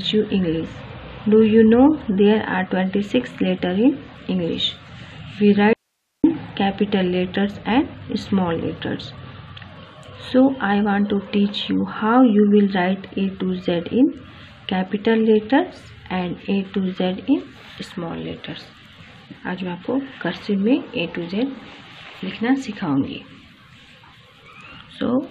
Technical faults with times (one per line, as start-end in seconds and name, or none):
5.73-6.24 audio dropout to a faint residue